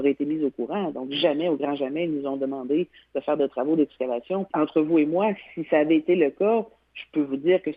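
No technical faults detected.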